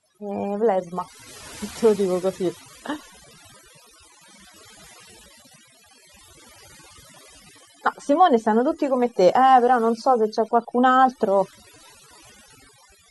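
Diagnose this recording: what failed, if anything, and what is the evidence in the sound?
The failure is in the processing stage: a noise reduction step was set far too aggressively, producing overdone noise removal that runs through the whole recording. Frequency bands that sat close to the tool's noise estimate were pulled down hard or gated off entirely, and the quieter components of the speech were caught along with the noise. As a result, the pauses fall to near silence sprinkled with twinkling, chirpy specks.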